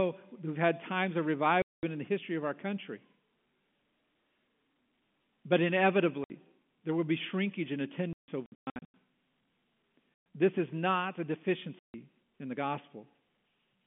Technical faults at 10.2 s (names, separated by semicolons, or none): packet loss filled with silence